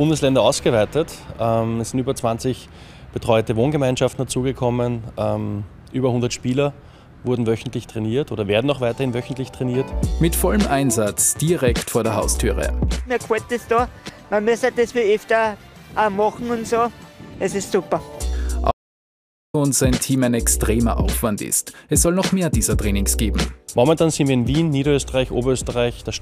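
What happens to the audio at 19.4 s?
At 19.4 s you're inside an audio dropout to silence that runs from 18.71 to 19.54 s. The sound cuts off mid-flow into dead digital silence, with no room tone at all, for about 0.83 s, likely because the input was briefly lost while recording carried on.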